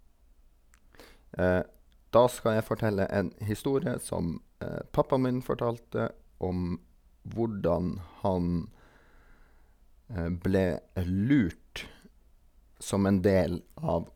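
No technical faults can be heard anywhere in the recording. Nothing in the speech points to a problem in how it was captured or carried.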